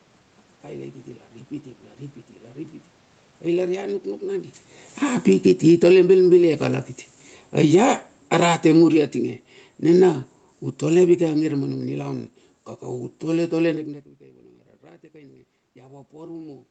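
From 5.03 to 6.13 s the automatic gain falls by about 12 dB. The level control judged the input too loud and pulled back, so the sound and the room noise sink together. That shared drop is what separates it from the talker moving around 4.5 s, when the background stayed steady. Automatic gain rising then lifts everything about 6 dB from 6.03 to 8.14 s, before the gain falls again by about 10 dB from 7.43 to 12.01 s in a slow slide. From 15.11 to 16.56 s the gain rises about 3 dB, partly recovering an input drop of about 18 dB after the talker moved around 14 s. Here the background swells along with the sound, which marks the change as the control's doing rather than the talker's.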